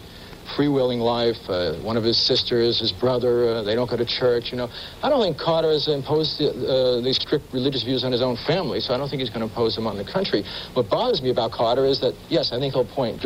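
No technical faults can be heard anywhere in the audio, and the signal holds steady throughout.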